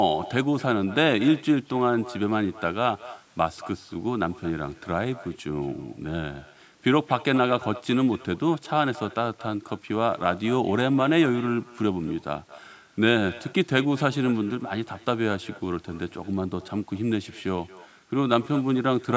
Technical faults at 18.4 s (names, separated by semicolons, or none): echo with no canceller